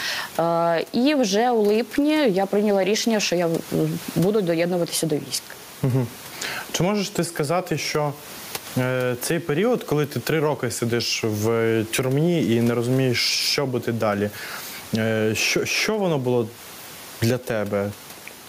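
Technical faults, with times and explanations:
Throughout, gain pumping: input gain likely set far too high, so a fast limiter pulls the level down by around 15 dB on every loud sound. The room noise sits about 29 dB below the speech, and loud and soft parts are squashed together.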